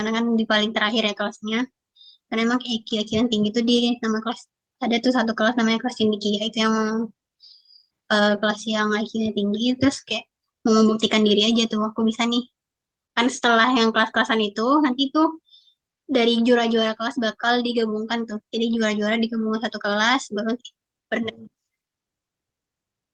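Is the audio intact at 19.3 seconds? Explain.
Yes, the audio is intact at 19.3 seconds, with no fault at that moment.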